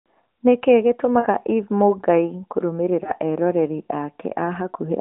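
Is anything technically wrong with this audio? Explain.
Yes, there are two short dropouts from lost AMR speech frames. The first is at 1.20–1.27 s, about 40 ms of missing audio, which fits two dropped frames. The second is at 3.04–3.12 s, about 20 ms, which fits a single frame. Radio errors corrupted those frames, so the narrowband AMR decoder filled the gaps by repeating its last good settings at lower gain. You hear a brief dip or warble, with the sound sagging before it recovers.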